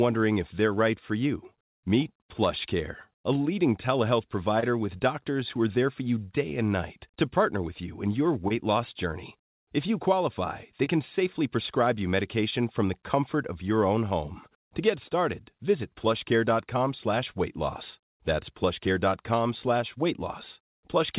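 At 4.60, 8.48 and 10.84 s, about 20 ms of speech never reached the decoder in time. Each short concealed packet loss was bridged by extending the preceding sound, heard as a brief smear or wobble of about 40 ms before the real audio returns. Nothing in the clip sits above 4 kHz, which fits a narrowband call codec such as G.711.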